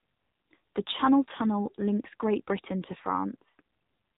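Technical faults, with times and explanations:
Throughout: AMR narrowband mobile codec. Nothing above 3.8 kHz survives, and the speech sounds heavily buzzy and synthetic, which fits a low mode near 6.7 kbps. The codec rebuilds the speech from a vocal-tract model driven by only a few pulses every 5 ms.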